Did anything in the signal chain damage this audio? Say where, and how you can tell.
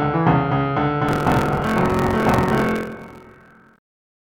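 Yes, in the driver or buffer stage. Buffer tearing runs from 1.07 to 3.81 s: the write and read pointers have slipped, so about a third of each period replays audio roughly 50 ms old. Its hard joins produce a steady 43.1 Hz robotic buzz, which fits a 1024-sample buffer.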